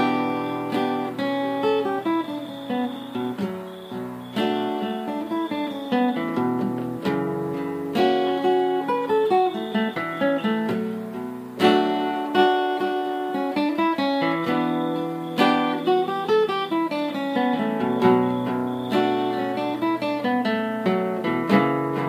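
No technical faults can be heard in this recording.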